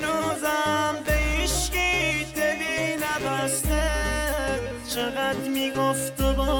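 Computer activity noise runs through the whole clip: a buzzy, chirping layer pulsing at somewhere around 150 times a second, sitting roughly 20 dB under the wanted sound. It comes from the processor, graphics card or mouse drawing changing current, which shifts the ground shared with the audio circuit. Unlike steady mains hum, its texture tracks the machine's workload rather than staying fixed, and it ignores what the audio itself is doing.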